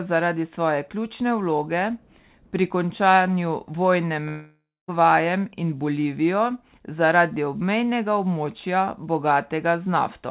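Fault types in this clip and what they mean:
Long network dropout: from 4.28 to 4.91 s, right after "pri končanju vojne", the speech breaks off and about 0.6 s of audio never arrives. The receiver papers over the gap by stretching the last sound into a buzzy tail that fades, leaving about 0.23 s of near silence before speech resumes past the lost section. This is likely a burst of lost packets in the call's jitter buffer, heard through narrowband audio with nothing above 4 kHz.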